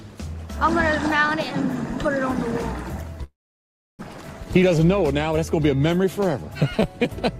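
At 3.23 s the sound breaks off. The last fragment stretches into a fading buzz, then near silence until 4.01 s. This is likely a long network dropout: no audio arrived, and about 600 ms is simply missing when sound resumes.

From 4.08 to 5.70 s the audio runs at about 108% speed with unchanged pitch. It sounds hurried. This is a jitter buffer speed-up. The receiver trims short pitch-period pieces, roughly 150 ms in all, to cut the delay built up after the gap.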